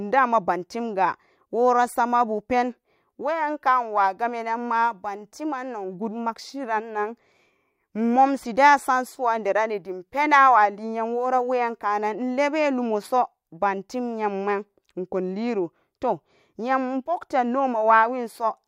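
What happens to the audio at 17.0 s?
Nothing goes wrong at 17.0 s; the speech runs through that moment intact, with no dropout, click or distortion.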